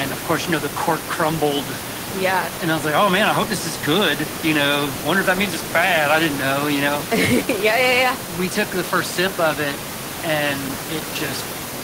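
Nothing stood out on listening to this speech clip, apart from room noise sitting about 11 dB below the speech as part of the recording itself.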